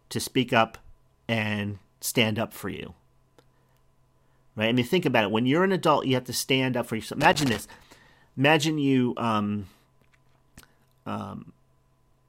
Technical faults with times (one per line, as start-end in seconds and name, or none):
7.21-7.61 loose connector crackle